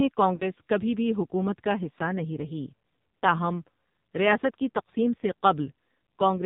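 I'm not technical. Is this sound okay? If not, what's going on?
No. All the way through, the speech sounds thin, buzzy and robotic, with nothing crisp or bright at the top. That is the AMR narrowband mobile codec, an old phone-network speech format running at a very low quality setting that rebuilds the voice from a rough model and discards all high frequencies.

From about 0.36 to 0.43 s, just before "کبھی بھی حکومت کا", there is a brief wobble or dip in the sound. These are lost AMR speech frames: about 40 ms of data was damaged in transmission and rejected, so the decoder briefly stretched the previous sound to fill the gap.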